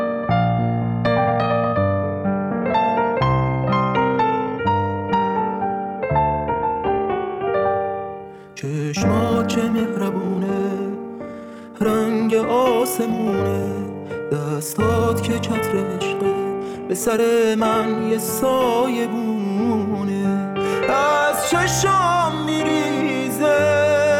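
The audio opens with a time-stretched section running from 0.0 to 18.0 s. Across that span it plays at about 1.38 times normal speed, yet the pitch does not rise. The result sounds rushed. At 18.0 s the pace drops abruptly to normal. The likely cause is software squeezing this part to fit a shorter length. It holds pitch by cutting out short slices of sound, and dropping those slices makes the hurried texture.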